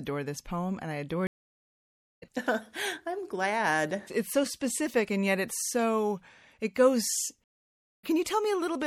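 Throughout, the speech sounds watery and swirly, with dulled treble and smeared consonants. This is likely MP3 compression, which fits a bitrate around 64 kbps.

At 1.27 s the audio goes silent for 0.95 s, and at 7.44 s for 0.59 s. Each is a stream reconnect, where a restarted decoder resumes roughly 0.7 s later.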